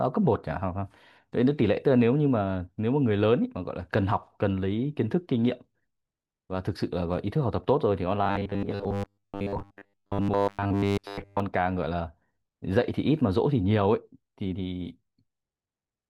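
Robotic sound from repeated short buffers runs from 8.24 to 11.40 s. The speech turns into a rigid, metallic buzz pitched at 100 Hz, which fits a buffer about 10 ms long being replayed over and over. The likely cause is new audio arriving too rarely, so the last short chunk is looped while the real signal is dropped. Most of the stretch is filled this way, leaving the speech only loosely traceable beneath the drone.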